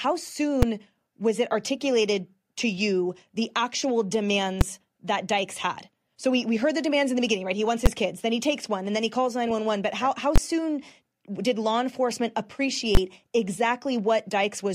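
Five sharp, very loud bangs cut through the speech: at 0.62 s, just before "was it articulated to"; at 4.61 s, right after "to you the actual"; at 7.86 s; at 10.36 s, following "how how"; and at 12.95 s. These are invalid numbers at full scale. A calculation produced infinite or invalid values that were pinned to the maximum level for blocks of 5 to 20 ms, each short enough to be heard as a single bang.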